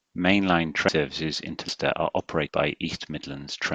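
The recording was likely made in one-second chunks, with about a fifth of a second dropped at each handover: audio missing between chunks. The sound jumps abruptly at 0.89, 1.69 and 2.49 s, butting the two sides together with no gap.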